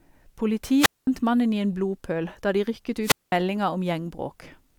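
At 0.77 and 3.02 s there's a wireless microphone squelch dropout: the radio link fades, hiss swells, then the receiver mutes for about 0.2 s before "mannen i en blodpøl" and after "blodpøl da de rykket".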